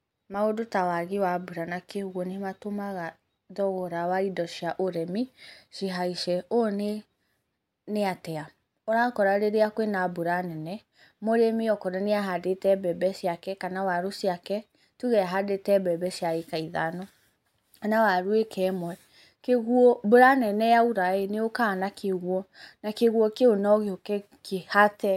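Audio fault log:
No technical faults are present in this speech recording.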